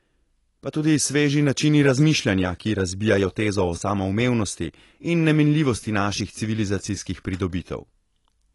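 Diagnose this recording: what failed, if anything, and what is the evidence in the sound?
The codec stage is where this went wrong, and it's audible from start to finish. The speech has nothing above about 11.5 kHz, so it sounds dull, and sibilants and held sounds pick up a fizzy, warbling smear. That's the signature of AAC compression, likely AAC-LC at a low bitrate, something like 32 kbps. The encoder starves the spectrum, pulling the cut-off down and coarsely quantising what's left.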